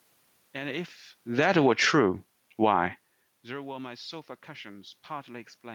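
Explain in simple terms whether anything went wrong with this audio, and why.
Two things went wrong, both with the automatic level control that sets how loud the recording is.

From 1.24 to 1.94 s there is automatic gain falling. The control decided the incoming sound was too loud and turned itself down over that stretch, so the voice starts out loud and then sinks. The room noise in the background sinks with it, which is how you can tell it was the control reacting and not the talker moving.

Starting at 1.87 s and lasting to the end there is automatic gain rising. The incoming sound had dropped a long way, so the control began turning itself back up, slowly, over several seconds. The voice and the room noise swell up together. The talker does shift position around 1 s and again around 3 s. But the level change from the control is on top of that and drags the background along with the voice.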